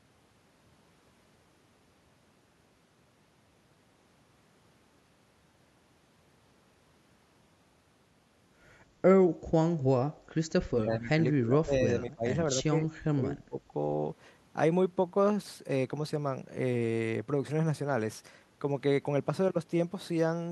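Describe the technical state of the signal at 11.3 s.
At 11.3 s the speech sits inside a stretch of speech suppressed in double talk, from 10.68 to 12.25 s. The level falls in pieces, about 20 dB at its deepest, for roughly a second overall. An echo canceller likely mistook the talker for echo.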